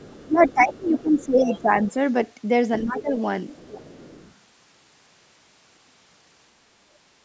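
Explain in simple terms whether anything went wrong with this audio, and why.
A faint second voice sits underneath the talker at 0 to 0.53 s, 0.72 to 1.25 s, 1.43 to 1.62 s and, quieter still, 3.49 to 4.32 s. This is the other side's voice leaking through, likely because the talker's loudspeaker playing the far side was picked up by the microphone and not fully cleaned out.

From 0.26 to 1.97 s, and again from 2.84 to 3.17 s, the talker's own voice dips. This is speech suppressed in double talk: when both sides talked together, the call's echo cleanup likely turned the talker down too.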